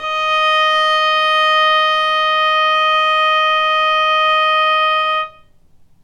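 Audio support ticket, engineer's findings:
Adaptive stream starting at a low bitrate: player opened on a low-rate rendition, sounding like HE-AAC near 20 kbit/s. 0.00–4.54 s: synthetic, smeared treble, heavier codec artefacts, nothing above 14.8 kHz. Abrupt gapless step up at 4.54 s, consistent with AAC-LC around 96 kbit/s.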